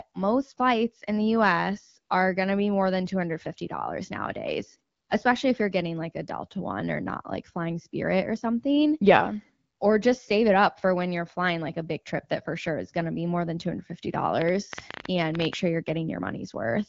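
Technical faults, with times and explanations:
14.42–15.54 s, train of clicks: about 11.6 irregularly spaced pulses per second, roughly 15 in all, standing well above the speech, likely interference from nearby equipment.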